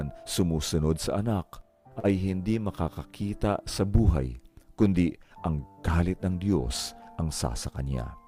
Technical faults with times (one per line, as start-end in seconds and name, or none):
1.99-2.07 short stall from a late packet